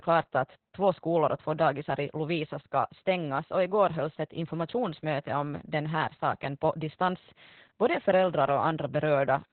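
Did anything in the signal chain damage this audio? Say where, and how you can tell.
Yes, the codec: heavy Opus voice compression throughout. Nothing above 4.3 kHz, and the speech sounds muffled, hoarse and robotic, which fits narrowband SILK at around 8 kbps.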